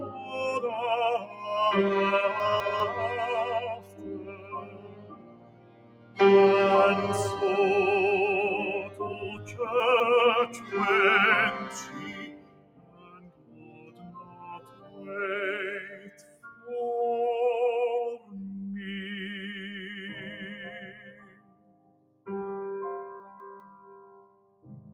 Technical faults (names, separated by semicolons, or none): noise suppressor applied to music or sounds; sound cut by the noise suppressor; chunks out of order